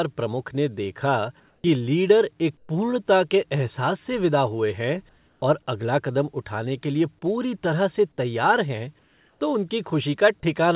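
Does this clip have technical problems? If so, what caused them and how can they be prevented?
Yes. In the pauses at 1.40–1.64 s, 2.57–2.69 s, 5.09–5.42 s and 8.99–9.41 s, the real background drops out and a steady, featureless hiss about 1 to 3 dB quieter takes its place. This is comfort noise in place of the background, likely from discontinuous transmission: the sender stopped sending audio during silence, and the receiver filled each gap with synthetic noise that only roughly matches the background. To prevent it, disable discontinuous transmission (DTX) or voice-activity detection on the sending side.

At 1.61 s, just as the first replaced pause ends, the sound comes back abruptly. Its first 30 ms, up to 1.64 s, are missing and covered by the same synthetic hiss. This is an onset clipped by the voice detector, likely because the detector was slow to notice that sound had resumed, so those opening moments were never sent. 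The call path itself has nothing above 4 kHz, which fits G.711 A-law. To prevent the clipping, give the voice detector lookahead or a more sensitive onset threshold, or turn it off.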